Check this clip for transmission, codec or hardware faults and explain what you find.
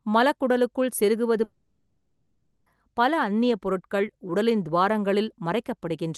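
One transmission fault stands out, heard over a call path whose high end stops near 12 kHz, which fits Opus at a moderate bitrate.

A long network dropout runs from 1.43 to 2.67 s, just after "மலக்குடலுக்குள் செருகுவது". About 1.2 s of audio never arrives, likely from lost packets. The receiver extends the last sound as a fading buzz, briefly goes silent for about 0.1 s, then resumes with that stretch missing.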